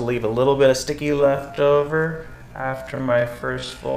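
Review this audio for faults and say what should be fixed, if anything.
From 1.0 s to the end, the audio runs at half speed with unchanged pitch, a time-stretched section. It drags, likely from software lengthening the audio by repeating short pieces to fill time. Avoid it by editing to length rather than stretching.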